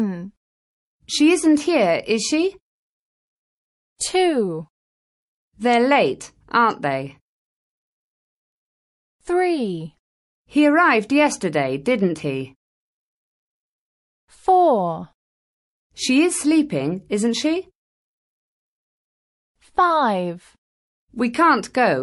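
From the start the whole thing has a watery, swirly edge, with faint detail flickering in and out. That's likely MP3 compression, and the damage is plainly audible, pointing to something around 48 kbps.

At 3.96 s there's pre-echo: a sharp attack lands late in a coding block, so the noise meant for it gets smeared backwards about 41 ms, rising about 21 dB into a hiss before the hit. The encoder stuck with long 48 ms windows instead of switching to short blocks.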